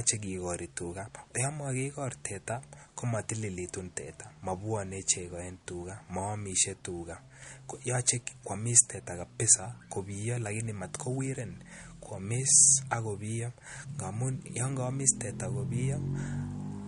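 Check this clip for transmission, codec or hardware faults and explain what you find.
One fault runs through the whole clip. MP3 compression, throughout: the treble stops dead at 11.1 kHz and weak frequency lines flicker between frames, giving plainly audible watery swirl on the speech, likely from a starved encoder at around 48 kbps.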